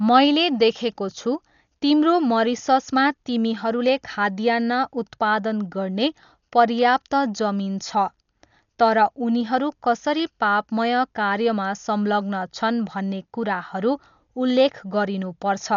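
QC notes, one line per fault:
Throughout, Dolby Digital compression: the speech sounds dull and muffled, with nothing above about 6.9 kHz, and a rough, fluttering noise hangs around the voiced tones, a sign of heavy codec damage. The likely cause is an AC-3 style encode at a low bitrate, around 48 kbps, where the encoder narrowed the band and left many frequency lines without mantissa bits, so the decoder filled those gaps with dither noise that breaks up the clean harmonics.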